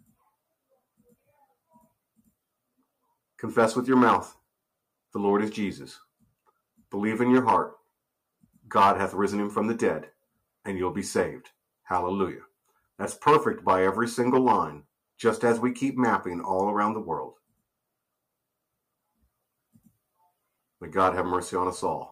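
No technical faults can be heard anywhere in this audio.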